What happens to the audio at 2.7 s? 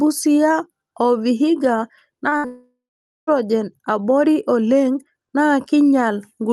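From 2.46 to 3.29 s the sound smears into a fading buzz, then 0.48 s of silence: likely a long network dropout that lost 0.82 s of audio.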